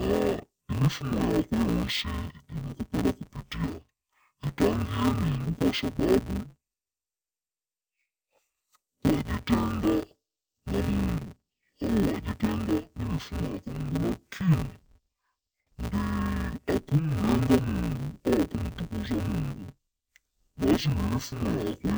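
Throughout, the speech sounds dull and robotic with a buzz near 172 Hz: interleaved audio read as planar, splitting each 5.8 ms block into left and right halves.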